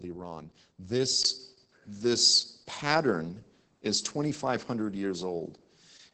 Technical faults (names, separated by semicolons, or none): Opus voice compression; dropped samples; input switched to a poorer device